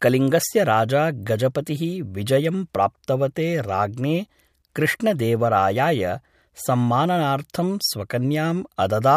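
From 0.21 to 9.05 s, faint clock slip clicks tick about every 0.15 s, likely from unsynchronised device clocks, showing as tiny waveform jumps and thin, evenly spaced spectrogram lines.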